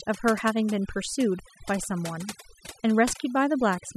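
From start to finish, this speech clip suffers from overdone noise removal. The reducer was pushed so hard that bands sitting near its noise estimate get pulled right down, taking quieter parts of the voice along. You hear near-silent gaps with twinkling specks.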